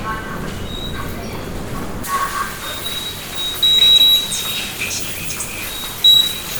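From 2.04 s to the end, pre-emphasis is left on: a treble boost applied for transmission was never undone by the matching de-emphasis. Highs sit about 11 dB above 1 kHz at 10 kHz, consistent with a J.17 curve, so the sound turns thin, bright and sibilant.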